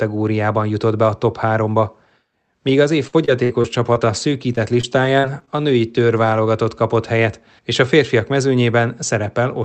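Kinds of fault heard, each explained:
Repeated packet loss (robotic sound): the call kept dropping or delaying packets from 2.67 to 6.49 s, with ten gaps filled by extending the previous sound, the longest 55 ms, so the speech turns choppy before "kapott helyet és a".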